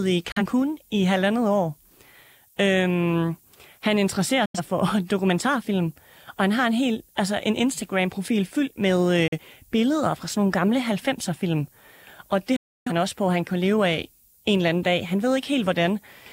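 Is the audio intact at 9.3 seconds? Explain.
No. From 9.28 to 9.39 s there is a digital broadcast dropout. The receiver either lost the digital signal or rejected frames that failed their checksum, and it muted until good frames returned. The sound fades out over about 3 ms to silence, and the gap fits a single lost frame of about 43 ms of programme. On a waveform this shows as a flat line, and on a spectrogram as a blank vertical band across all frequencies.

Around that moment the low bit depth with noise shaping that runs through the whole clip is also present. The signal sounds as if it were quantized to about 9 bits, and the rounding error is pushed upward in frequency. The result is a steady, thin hiss roughly 30 dB below the speech that grows toward the top of the band. A spectrogram shows a constant noise floor that brightens toward the highest frequencies.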